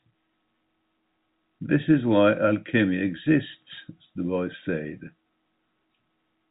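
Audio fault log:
Nothing to log here, just speech carried over ordinary G.711 telephone coding, with the top end stopping at 3.8 kHz as that format does.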